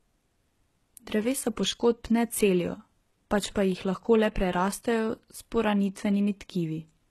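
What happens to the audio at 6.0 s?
HE-AAC compression is audible at 6.0 s, as it is across the whole clip. Nothing reaches above 12.4 kHz, and the treble beneath that limit sounds synthetic. This is likely spectral band replication: only the lower band is truly coded, and the upper band is copied up from it and shaped by a rough envelope. The result is gritty, lispy s sounds with a metallic edge, and the damage fits a very low bitrate of around 16 kbps.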